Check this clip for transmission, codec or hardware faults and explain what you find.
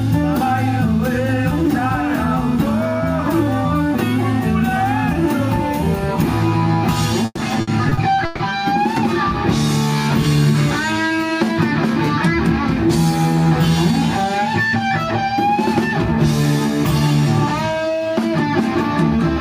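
One transmission fault is present: repeated packet loss (robotic sound) from 7.25 to 8.41 s. Five dropouts, the longest 140 ms, are each patched by extending the preceding sound, covering about 31% of that stretch and producing choppy audio with pieces missing.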